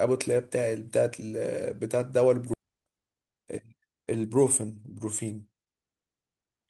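Skip ahead at 2.53 to 2.55 s: the speech jumps forward with no gap. About a second of audio never reached playback, either lost in transit or discarded when the jitter buffer overflowed while later audio was already queued. Nothing fills the hole, so the sound before the jump joins almost directly onto the sound after it, and the listener hears an abrupt discontinuity in the middle of the flow of speech.

Jitter buffer speed-up from 2.63 to 4.92 s: right after the jump the speech runs at about 116% of normal rate with its pitch unchanged, so it sounds hurried. The buffer was holding more audio than its target, and to work off that excess the receiver repeatedly cut out short slices of one or a few pitch periods. Across this stretch those cuts add up to roughly 0.4 s of removed audio.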